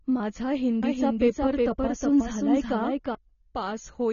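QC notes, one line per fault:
throughout: AAC compression. The speech is likely coded as AAC-LC at a low bitrate, which fits about 24 kbps. The encoder lowers the cut-off and starves the remaining bands of bits, so the sound is dull and smeared, with plainly audible warbling and fizz on sibilants.
0.83 to 3.15 s: doubled audio track. A second full-band copy of the speech is mixed in, likely from a slower capture path, trailing by roughly 400 ms at about the same level. It carries no decay or room colour, so it is heard as a hard echo that cuts in and out abruptly.
0.95 s: dropped samples. A couple of samples go missing, a gap of only a few hundredths of a millisecond, likely from a stream glitch, so the waveform jumps straight to a later value. No sound is lost, but the jump is heard as one sharp click.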